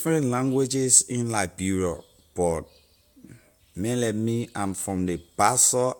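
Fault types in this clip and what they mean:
No technical fault can be heard anywhere in this speech recording. There is nothing to list for it.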